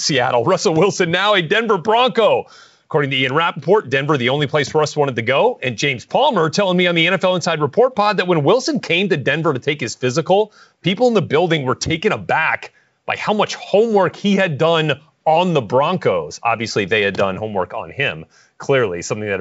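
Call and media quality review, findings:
No faults found in this speech recording. The G.722 wideband path at 64 kbit/s carries the band up to 7 kHz, with at most a faint hiss in the upper band.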